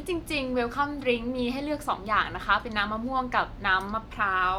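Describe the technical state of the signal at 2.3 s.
At 2.3 s the speech signal is intact, with no dropout, clipping, glitch or other fault audible at that moment.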